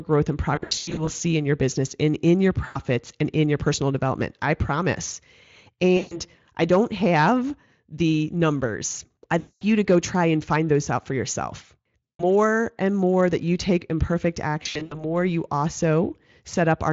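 VoIP packet loss concealed by the speech codec at 0.55–1.09, 2.65–2.81, 5.97–6.20, 9.39–9.63, 12.05–12.24 and 14.63–15.05 s: the Speex decoder extrapolates missing frames, smearing speech into fading buzzy tones or coloured noise.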